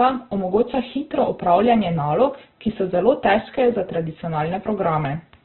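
Throughout, heavy Opus compression in its CELT mode leaves the speech narrowband, with nothing above 4.3 kHz, rough and grainy, likely from a very low bitrate.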